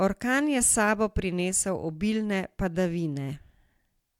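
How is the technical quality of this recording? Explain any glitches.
No glitches or faults present.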